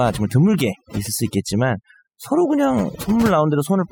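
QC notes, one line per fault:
Throughout: overdone noise removal. Bands near the noise estimate are gated off, leaving a lowered background that breaks up into twinkling specks, unlike simple low-pass dullness.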